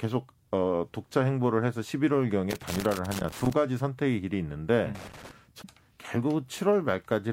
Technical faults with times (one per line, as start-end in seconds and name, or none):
2.51-3.53 loose connector crackle
4.95-5.31 loose connector crackle
5.61-5.65 damaged data in a compressed stream